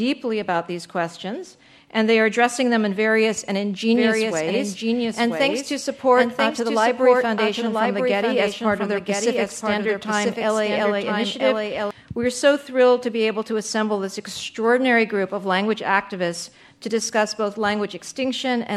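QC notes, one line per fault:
3.95–11.91 s, doubled audio track: a dry copy about one second late, about 5 dB quieter, starting and stopping abruptly, with no echo decay; likely a slower duplicate path.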